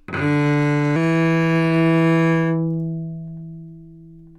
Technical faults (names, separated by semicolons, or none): section at the wrong speed